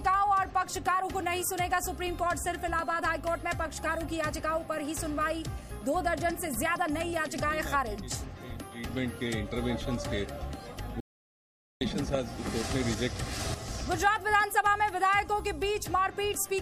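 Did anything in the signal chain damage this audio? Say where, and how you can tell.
Yes: an audio dropout to silence from 11.00 to 11.81 s, where the sound stops mid-flow and about 0.81 s is replaced by silence with no room tone. This most likely happened at the input, through a lost device or link, while the recorder kept writing silence.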